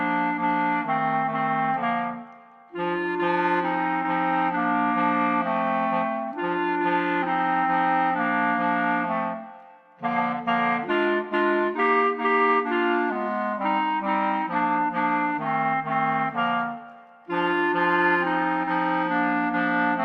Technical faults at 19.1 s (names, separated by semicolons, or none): none